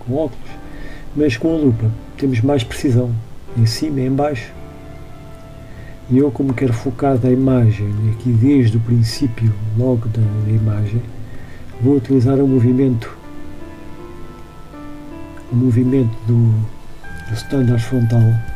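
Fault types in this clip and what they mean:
Mains buzz: A steady, raspy buzz runs under the audio from start to finish, roughly 30 dB below the main signal. It comes from sharp switching spikes on a 50 Hz supply getting into the chain, twice per cycle, so the energy is spread across many harmonics of 50 Hz reaching up into the kilohertz range. On a spectrogram this appears as a comb of evenly spaced horizontal lines; the waveform shows a faint, regular spiky ripple in quiet gaps.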